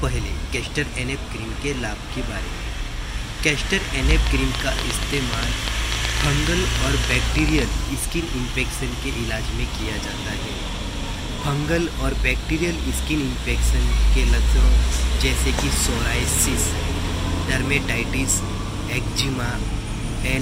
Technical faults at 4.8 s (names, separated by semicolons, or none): train of clicks